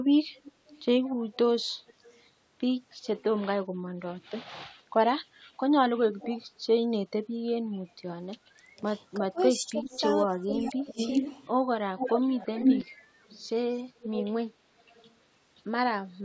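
A loudspeaker on the far end of the call likely fed its own playback back into its microphone, and the echo canceller there failed to remove all of it. The result is echo leak: a delayed copy of the speech trailing the original by 341 ms. It first appears from 0.34 to 2.29 s, about 25 dB below the speech, then as brief, very quiet scraps at 3.05 to 3.23 s and a louder fragment, around 15 dB down, at 6.19 to 6.45 s.

From 8.57 to 10.99 s both sides are talking, and the echo canceller, likely unable to separate the local talker from the returning echo, turns everything down. In this speech suppressed in double talk, the talker's level dips by as much as roughly 20 dB, in pieces totalling about a second. A short echo scrap at 9.84 to 10.0 s, about 20 dB down, falls inside this stretch.

The worst echo leak runs from 10.78 to 14.26 s, only about 5 dB below the speech. A last faint trace, about 35 dB down, comes at 14.79 to 15.14 s. 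Throughout, the call's microphone processing has nothing above 8 kHz.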